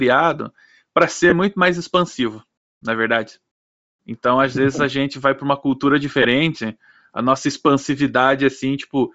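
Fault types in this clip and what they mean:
Bluetooth LC3 compression: The speech has a breathy, grainy upper edge throughout, likely from low-bitrate LC3 coding, consistent with about 32 kbps, replacing discarded treble with noise.
Lost LE Audio frames: Brief noisy smears at 1.30 s, before "muito mais expansivo na", and at 6.22 s, after "vai para uma cultura", each about 22 to 28 ms long. The decoder filled each gap by repeating the last spectrum with random signs.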